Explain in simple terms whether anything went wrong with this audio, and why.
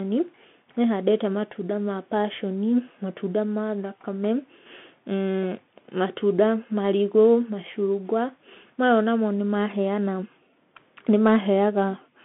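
The speech went through a Bluetooth CVSD headset codec, which squeezes sound into a narrow telephone-style band. From start to finish, nothing above about 3.8 kHz survives, so the speech sounds thin and boxy, with rough, scratchy s sounds and a grainy hiss underneath.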